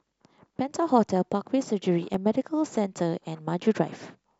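From 1.04 s to 4.34 s, clicks recur every 1.1 s, about four in all, the signature of clock drift buffer slips: two mismatched clocks, likely off by roughly 300 ppm, each dropping or repeating around fifteen samples. Their strict regularity separates them from random dropouts.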